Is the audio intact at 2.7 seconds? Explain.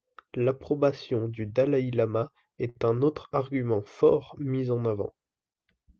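No. A short stall from a late packet runs from 2.69 to 2.77 s, just before "un autre argument fort". The packet arrived late, so the receiver stretched the last sound for about 59 ms. Nothing is lost, but that sound lingers with a faint buzz or dip.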